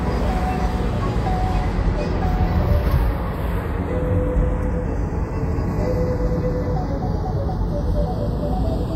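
Throughout, the channels are drifting apart: they run on clocks differing by roughly 30 parts per million, so the inter-channel delay slides to about 0.2 ms. Summed to mono, this gives slow flanging, seen on a spectrogram as comb notches sweeping gradually through the spectrum.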